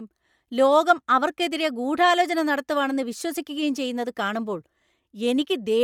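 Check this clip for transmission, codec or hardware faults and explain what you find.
One codec fault runs through the whole clip. Throughout, the speech has a breathy, grainy edge in its upper range, which is plainly audible. This is likely Bluetooth LC3 compression. The transform codec discards upper-spectrum detail and fills the gaps with noise, at a rate that fits about 48 kbps and 10 ms frames.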